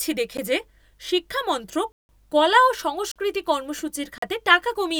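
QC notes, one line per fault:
0.37 s, 1.92–2.09 s, 3.12–3.16 s, 4.18–4.22 s: block of digital silence. The audio cuts hard to silence and back. The 0.37 s gap is a tick. The 170 ms hole fits an 8192-sample buffer, the 43 ms holes a 2048-sample one.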